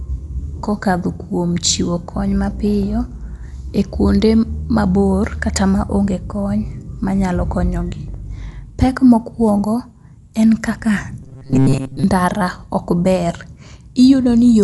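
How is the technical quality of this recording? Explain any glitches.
The recording has two clear technical problems. Throughout, it was likely encoded with Dolby Digital compression at a low bitrate, perhaps near 64 kbps. The encoder cut the band at 11.5 kHz and the decoder filled starved lines with noise, leaving the speech dull and rough.

From 11.23 to 12.04 s there is robotic sound, likely from repeated short buffers. Roughly 7.5 ms of audio looped for most of that stretch, imposing a rigid 134 Hz metallic buzz.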